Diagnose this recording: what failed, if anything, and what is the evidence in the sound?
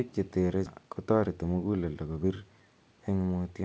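Network and jitter buffer stage: there's a skip ahead at 0.66 to 0.68 s. The speech jumps forward with no gap, and something like 0.7 s of audio just isn't there. A stretch of queued audio was dropped, either in transit or by the overflowing buffer, and the two sides were spliced almost directly.

Right after, from 0.76 to 2.41 s, you get a jitter buffer speed-up. Pitch holds steady but the speech runs about 113% of normal speed and sounds rushed. The receiver kept trimming pitch-period-sized slices, around a fifth of a second overall, to drain excess delay. The G.722 band-limit at 8 kHz is present throughout.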